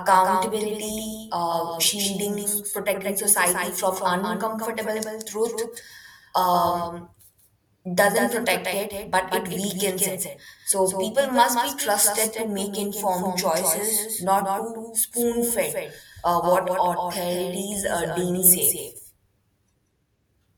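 A doubled audio track runs through the whole speech clip: every syllable is followed roughly a fifth of a second later by a second, full-band copy of itself, a few decibels quieter than the original. The trailing copy has no decay or room colour, so it sounds like a flat, stuttering slapback, not an echo. The likely cause is the same signal being captured twice, once through a slower path, and mixed together out of step.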